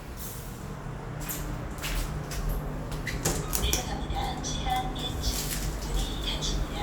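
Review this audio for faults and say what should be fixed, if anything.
Nothing stood out on listening to these sounds, so there is nothing to fix.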